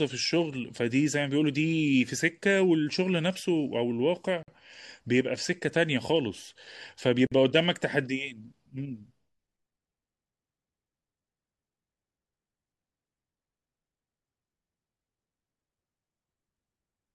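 At 4.43 to 4.48 s and again at 7.27 to 7.32 s the speech drops into a gap at a join of encoded pieces, each about 49 ms long. Separately encoded segments were butted together with their encoder delay and end padding left in, so the sound drops out and resumes where it left off.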